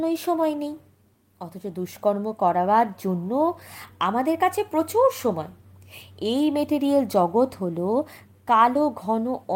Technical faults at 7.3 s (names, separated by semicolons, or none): none